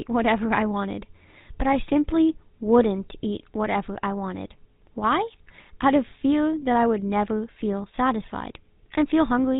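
From start to finish the speech has a buzzy, gravelly roughness, with nothing above 4 kHz. This is the GSM full-rate codec, plainly audible: the voice is rebuilt from a vocal-tract model driven by sparse, regularly spaced pulses, a sound that fits a 13 kbps stream.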